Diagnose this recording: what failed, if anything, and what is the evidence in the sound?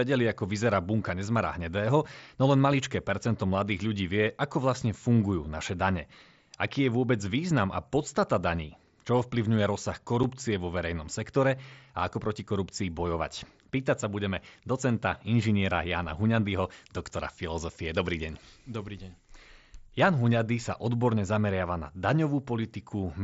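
Unconcealed Bluetooth headset packet loss at 10.23 s, on the network/radio stage between headset and phone. There's a 7.5 ms hole with hard edges, which fits one dropped mSBC packet. The codec leaves it empty instead of smoothing it over.

Pre-emphasis left on from 16.53 to 19.34 s, somewhere in the call-processing chain. The speech turns thin, bright and hissy on sibilants, with the top end about 10 dB hot at 10 kHz relative to 1 kHz. That fits a 50 µs FM-style boost applied without the matching de-emphasis cut.

Electrical switching spike at 19.74 s, picked up on the analogue wiring. It's a sharp snap or tight cluster of clicks sitting on top of the speech, not part of it, and most likely an arc from a nearby switch, motor or static discharge coupling into the line.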